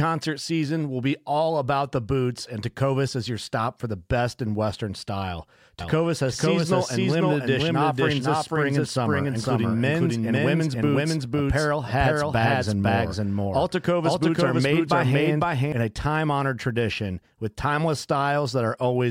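From 5.80 s to 15.72 s, starting just before "in a time honored", the speech is heard twice: a dry, full-band copy trails about half a second behind at roughly equal level, cutting in and out abruptly. This doubled audio track likely comes from a second, slower capture path.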